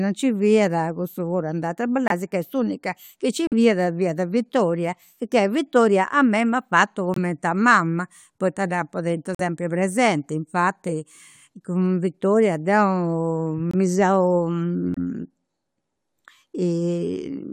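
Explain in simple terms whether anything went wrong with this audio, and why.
Damaged chunks of the compressed speech were rejected by the decoder and replaced with silence, a fault called corrupt frame muted. You hear sudden short gaps at 2.08, 3.47, 7.14 (after "a mei m'at fatu"), 9.35, 13.58 (the longest, about 0.17 s) and 14.94 s.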